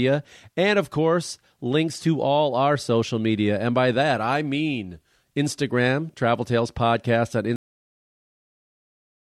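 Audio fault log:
7.56 s: cut-off end. The speech stops mid-sound and drops straight to digital silence with no decay, since the final buffers never got written or played out.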